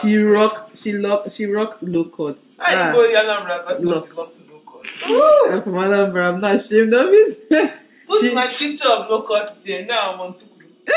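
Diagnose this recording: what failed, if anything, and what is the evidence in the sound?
Nothing in the recording points to a failure at any stage of the chain. No audible event needs tracing back to the wiring, converter, buffer, codec, network, storage or playback.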